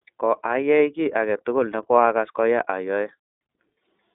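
From start to finish the speech carries the iLBC codec's signature. Content is confined to a telephone-style band of roughly 250 Hz to 3.7 kHz, with nothing above 3.8 kHz, so sibilants and breath detail are dulled. Each frame's excitation is coded on its own, with a granular, slightly synthetic roughness that fits 30 ms frames at around 13.3 kbps. The coding damage is plainly audible across the whole clip.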